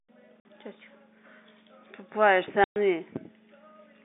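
Packet loss filled with silence happens twice: at 0.40 s the receiver drops 50 ms of audio, and at 2.64 s a 120 ms stretch, both replaced by dead silence, sized in steps that fit 10 ms packets. The speech is cut abruptly, and each hole has hard edges. At 3.16 s a loud pop lands, likely from a sudden voltage pulse such as a switch, static or a driver glitch. It is a single sharp crack about 10 dB above the speech, lasting under 30 ms, with the voice carrying on beneath it through the 200 Hz to 3.6 kHz telephone band of the G.711 line.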